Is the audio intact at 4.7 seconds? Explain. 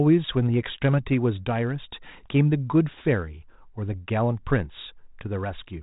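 Yes, the audio is intact at 4.7 seconds, with no dropout, click or distortion there.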